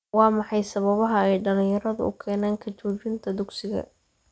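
A speech clip with a resampler restarted on every block, from 1.1 to 4.05 s. Regular ticks at 20 Hz mark each 50 ms block edge, heard only with signal, fitting a 24 kHz to 16 kHz conversion.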